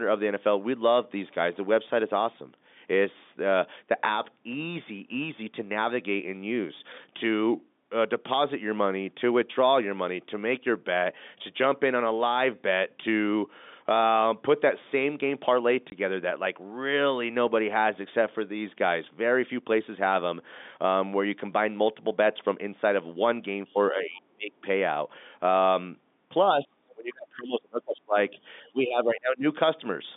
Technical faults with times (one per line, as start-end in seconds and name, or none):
15.90 packet loss filled with silence
23.66-23.74 other side's voice leaking through
23.73-24.66 speech suppressed in double talk
26.63-28.38 speech suppressed in double talk
28.71-29.45 speech suppressed in double talk